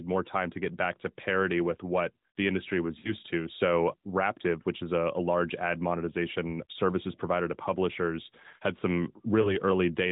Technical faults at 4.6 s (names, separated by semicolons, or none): none